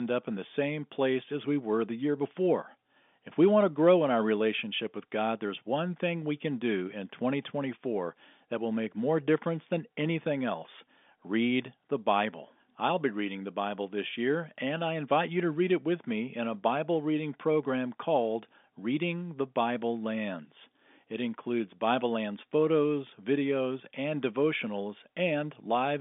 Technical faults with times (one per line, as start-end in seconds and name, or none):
none